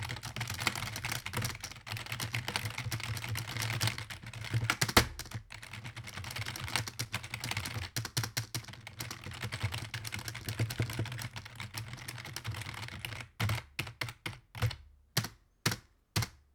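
A short, irregular burst of scratchy crackle cuts into the sound from 6.99 to 7.08 s, lasting under a tenth of a second. This is loose connector crackle: a worn or dirty contact rapidly making and breaking, chopping the signal into ragged fragments.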